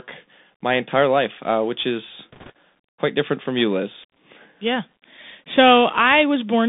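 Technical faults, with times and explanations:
Throughout: Bluetooth CVSD headset codec. The speech is confined to roughly 250 Hz to 3.6 kHz, with nothing audible above that, which fits a 64 kbit/s CVSD voice link. CVSD sends one bit per sample saying only whether the signal goes up or down, with an adapting step size. Loud, fast-changing high content outruns that step and distorts, so s sounds come out scratchy, and a granular hiss sits under the speech. The codec damage is plainly audible.
2.32 to 2.50 s: bit errors on a Bluetooth voice link. Between "life uh which is" and "quite different from you" the speech picks up a brief rushing, crackly noise. Flipped bits on the CVSD link produce it, at an error rate of around a couple of percent. Because every CVSD bit carries the same small weight and its effect decays quickly, the corruption spreads as noise across the stretch rather than as loud clicks.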